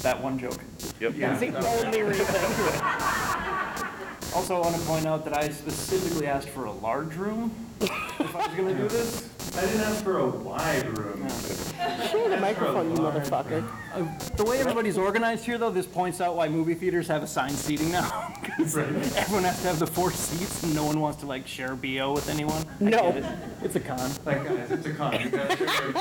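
Computer activity noise runs throughout the clip. It is a buzzing, chirping layer that pulses at roughly 200 Hz. It sits only about 10 dB below the sound. Changing processor or graphics load disturbs the shared ground. That leaks into the audio path.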